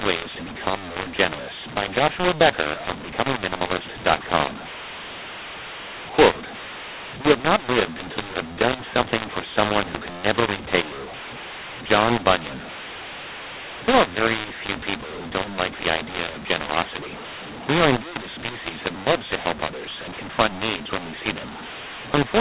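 Throughout, mu-law G.711 samples are decoded as A-law, a mu-law and A-law mix-up that scrambles levels, leaving the speech harsh and distorted and pauses filled with noise.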